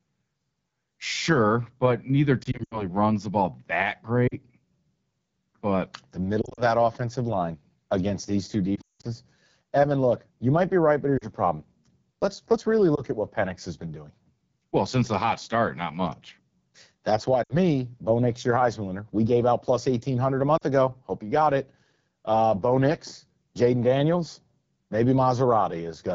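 Throughout, the AMR wideband (HD Voice) codec sounds rough and raspy, which fits its low 8.85 kbit/s rate. The grain is constant, unlike burst damage. Lost AMR speech frames cause brief dips or warbles at 2.43, 4.27 (after "runs the ball that"), 6.42 (before "offensive line against these"), 8.75 (after "line against these two", the longest at about 180 ms), 11.18, 12.95, 17.43 and 20.57 s. The decoder reuses the last good settings with falling gain, so longer runs drop to near silence within two frames.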